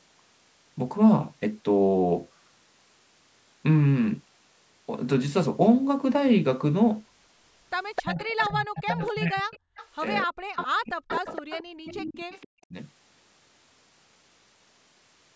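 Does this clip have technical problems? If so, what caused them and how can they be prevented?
Yes. Echo leak: a delayed copy of the speech, about 10 to 25 dB below it and about 260 ms behind, appears at 7.96–8.47, 8.78–9.11, 9.57–9.87, 10.56–10.65 and 11.08–12.46 s. It likely comes from a loudspeaker echo canceller letting residual echo return. Prevent it with headphones or better echo-canceller tuning.

Speech suppressed in double talk: the speech dips very deeply or cuts out in pieces from 8.01 to 9.61 s and from 10.23 to 12.74 s. This is likely because the canceller turned down both its own talker and the echo while both sides overlapped. Prevent it with a canceller that handles double talk better, or by using headphones.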